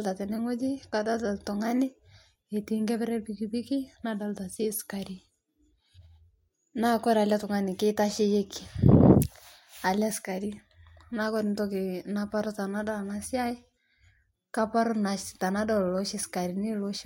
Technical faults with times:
none

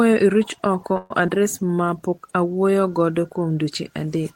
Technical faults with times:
0.97-1.11 call audio freeze
1.26-1.28 short concealed packet loss

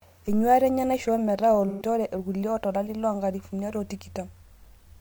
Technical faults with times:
1.68-1.82 AAC frame loss with concealment

